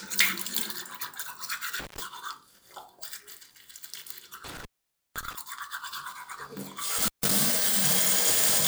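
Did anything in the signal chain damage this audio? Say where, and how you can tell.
Yes, an intermittent contact in the analogue wiring: the audio drops out at 1.80, 4.45 and 6.98 s for about 130, 510 and 150 ms, crackling as a loose cable or plug opens and recloses.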